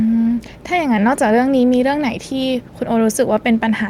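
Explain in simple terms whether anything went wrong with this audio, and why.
Listening to this speech recording, nothing stood out as having gone wrong.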